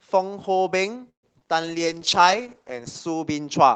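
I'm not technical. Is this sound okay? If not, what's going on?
No. There are three problems, all close together.

From 1.09 to 1.25 s there is a call audio freeze. The speech stops, and the last sound drags on briefly before going silent for about a tenth of a second. This was likely caused by the data arriving late over the network. When it arrived, the speech picked up exactly where it had stopped. So nothing is lost. The speech is just pushed back by a little over a tenth of a second.

At about 1.4 s there is a short concealed packet loss. A tiny piece of the speech, about 20 milliseconds, never arrived. The receiver papered over the hole by stretching the sound just before it. You may hear a brief smear or wobble there. A very short sound could be missing.

From 1.61 s to the end there is a call bitrate drop. The connection seemed to weaken, so the call started sending much less detail. 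The speech turns rougher and more muffled. It stays at its worst for well over a second and does not recover before the clip ends.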